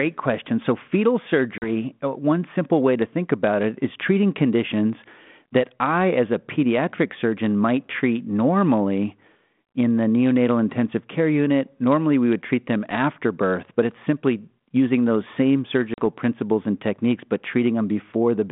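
At 1.58 s and again at 15.94 s, just after "simply using those same", the speech drops into a hard-edged 40 ms hole, about two packets, before "uh one simple way" and "principles and techniques but". Each gap comes back slightly distorted as the G.726 ADPCM decoder's predictor and step size, thrown out of step by the lost packets, resynchronise with the sender's over the following tens of milliseconds: packet loss on the ADPCM call.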